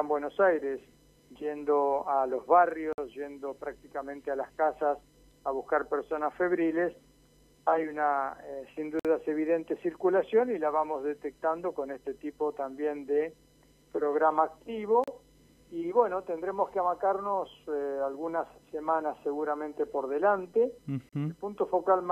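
At 2.93, 8.99, 15.04 and 21.09 s the sound drops out into a short, hard-edged hole of silence, about 53, 54, 37 and 36 ms long. They land almost exactly six seconds apart, which fits a stream cut into 6-second segments. It's a gap between stream segments: the time stamps don't quite meet, so the player pads the join with silence. Nothing's actually missing, just pushed later.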